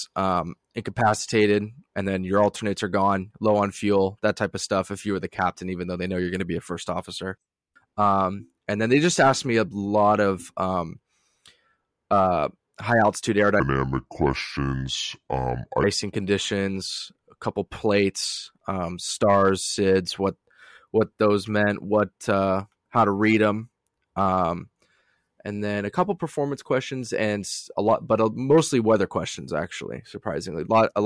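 From 13.60 s to 15.84 s, just after "uh high altitude" and up to "conditions a couple plates", the speech abruptly drops to a slow, deep drawl, running at about 0.69 times normal speed and pitched roughly 6.45 semitones lower. This is a wrong sample rate fault: the samples are clocked out more slowly than they were captured, with no resampling, so tempo and pitch fall together by the same ratio, which fits 32 kHz audio played back at 22 kHz.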